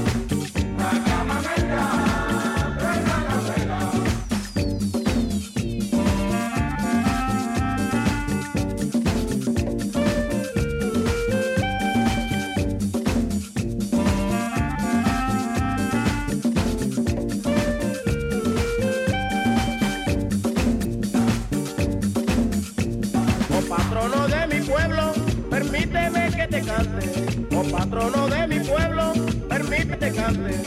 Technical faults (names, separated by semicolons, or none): damaged data in a compressed stream